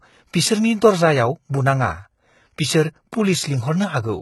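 From start to finish the treble sounds bright but synthetic, the sign of heavy HE-AAC compression, likely at a low rate that fits roughly 16 kbps. The upper band is rebuilt by copying lower bands upward, so its harmonics don't line up with the speech beneath, and s sounds come out gritty and lispy. Nothing reaches above 11.8 kHz. Unlike a plain low-pass, which leaves the top dull, here the highs remain present but are not genuine.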